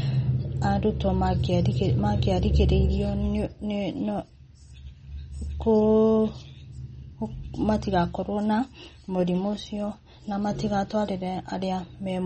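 A speech recording carrying plainly audible MP3 compression damage from start to finish: watery, swirling texture and smeared consonant attacks. A spectrogram shows a hard ceiling at 8.4 kHz with flickering holes below it, likely from MP3 encoding at roughly 32 kbps.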